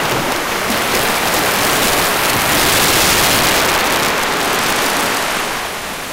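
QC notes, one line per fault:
Throughout: integer overflow. The loudest moments are driven about 8 dB past full scale, and instead of being held at the limit, the samples that exceed it, roughly 2 percent of them, wrap around to the opposite extreme of the range. Each wrapped peak becomes a sudden full-range jump, heard as a violent crack on loud passages. Clipping would flatten those peaks into a buzzy, fuzzy edge. These are far sharper, harsher snaps.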